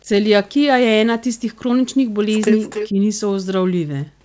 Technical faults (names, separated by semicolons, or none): echo leak